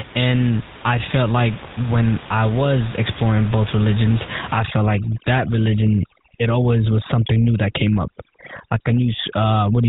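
From the first second, the whole clip carries the GSM full-rate codec's plainly audible buzzy, gravelly roughness and nothing above 4 kHz, which fits 13 kbps GSM coding of a pulse-driven vocal-tract model. Right after "was exploring both religions", at 4.59 s through to the end, overdone noise removal kicks in. Frequency bands near the noise estimate get slammed shut, so the room noise, which had been sitting about 17 dB under the speech, drops and breaks up into twinkling, warbling specks.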